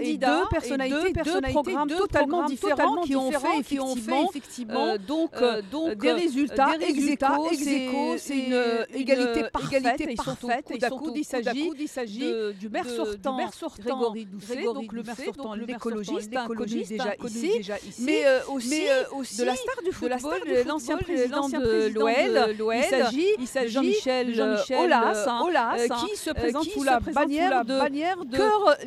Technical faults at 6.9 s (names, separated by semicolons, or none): doubled audio track